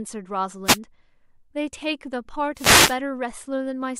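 At 0.65 to 0.78 s, and again at 2.55 to 2.98 s, the speech is hit by a wireless microphone noise hit: the radio link of an analogue FM microphone fades as reflected signals cancel, so receiver noise swells over the voice as a brief swish of static. The second hit lasts much longer. On a spectrogram each appears as a broadband haze smearing the speech harmonics, and the waveform shows a fuzzy, raised noise floor.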